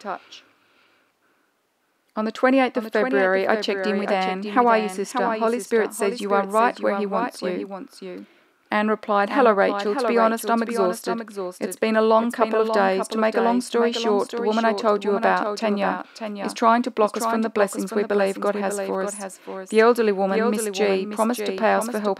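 From start to finish the audio carries a doubled audio track: a second, full-band copy trails about half a second behind, roughly 10 dB quieter, with no decay or room colour, likely from a slower capture path. On a waveform or spectrogram, every event reappears as a fainter duplicate at that fixed offset.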